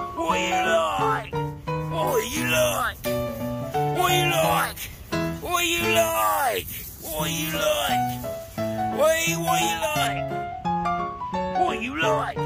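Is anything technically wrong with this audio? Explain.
Yes. From 2.07 to 10.07 s, pre-emphasis is left on: a 75 µs FM treble boost went uncorrected, lifting 10 kHz about 14 dB above 1 kHz, so the sound turns thin, bright and sibilant.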